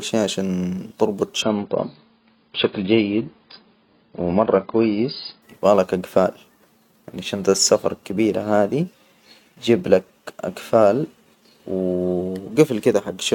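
From 1.42 s to 5.42 s, the speech plays as an adaptive stream at a lower bitrate. The connection slowed. Treble above 5 kHz vanishes and codec artefacts thicken, which fits roughly 16 kbit/s. Both switches are abrupt, with no gap.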